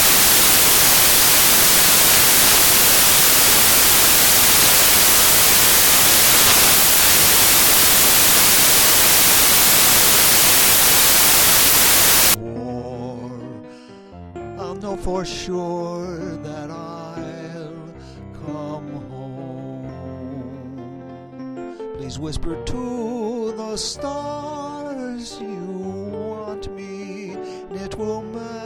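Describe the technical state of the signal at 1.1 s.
At 1.1 s the signal is corrupted by samples built from the wrong bytes, a fault running from the very start to 12.34 s. The reader assembles each sample's bytes wrongly, so the rapidly changing low-order bits land in the most significant position and dominate the value. The result is loud, harsh broadband noise, close to white on louder sounds. Unlike added hiss, which holds a steady floor, this noise comes from the samples themselves being misread.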